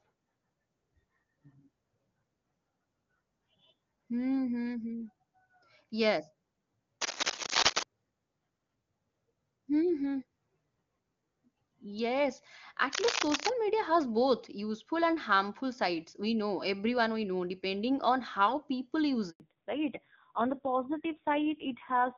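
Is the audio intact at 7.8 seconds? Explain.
No. From 7.01 to 7.84 s there is cable scratch noise: dense, uneven scratching and rustling, somewhat louder than the speech. It is likely from a worn connector or cable shifting contact resistance. It is irregular and bunched, unlike the isolated ticks of digital clicks.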